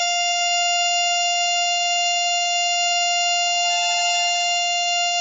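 Throughout the music, heavy MP3 compression is the likely cause of the damage: nothing sounds above 7.6 kHz, and starved frequency lines flicker on and off, giving a watery swirl and smeared attacks, which fits a bitrate near 16 kbps. A simple low-pass filter would dull the treble without that swirl.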